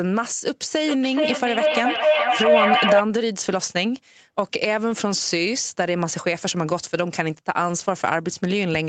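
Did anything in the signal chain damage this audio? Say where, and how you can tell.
Yes. From 0.75 to 3.07 s a feedback howl builds as two devices on the same call re-feed each other, peaking about 6 dB above the speech. A spectrogram shows a bright line near 700 Hz, and the waveform pulses roughly every 400 ms.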